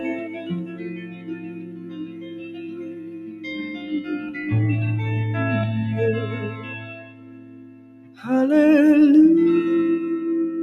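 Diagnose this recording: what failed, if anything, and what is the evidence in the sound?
Call processing failed: a speech noise suppressor stayed active on non-speech sound. It treats steady tones and decays as noise, so its gain swings by around 20 dB across the clip. Held sound sinks and tails thin while onsets pass through.

The suppressor also cut specific sound harder than the rest: at 0.17 to 0.44 s (about 5 dB down), 0.63 to 3.45 s and 7.08 to 8.18 s (about 6 dB each). Sustained portions sag and decays shorten because the suppressor classified them as noise.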